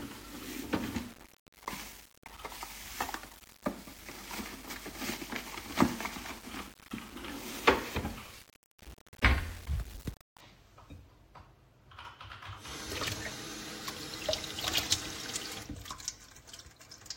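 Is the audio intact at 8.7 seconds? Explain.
No. From 0.0 to 10.4 s, the sound carries grainy distortion that moves with the signal, and quiet passages break into gritty sputter. The likely cause is low bit depth without dither: rounding to about 7 bits leaves error only roughly 15 dB below the signal.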